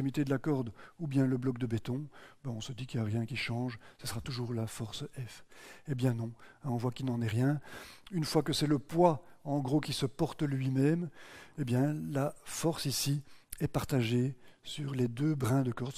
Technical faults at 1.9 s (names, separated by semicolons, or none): none